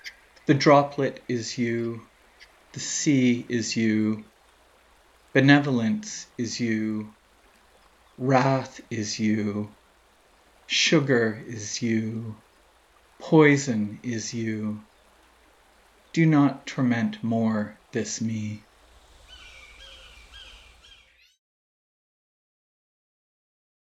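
Nothing here counts as a technical fault; the only thing worth noting is a gentle fade-out that begins somewhere around 20.5 s and has finished by 21.4 s, smooth and deliberate with no click or hard edge.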